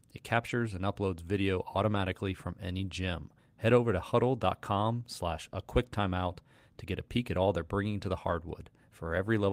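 At 0.47 to 0.49 s, about 20 ms of speech turns briefly rough and noisy. This is a lost packet rebuilt from error correction. The decoder filled the hole with a low-bitrate backup copy carried in the following packet, so nothing drops out. The same roughness returns at 1.93 to 1.99 s and at 8.27 to 8.33 s. Each of these holds about 40 ms of rebuilt audio, which fits two separate lost packets.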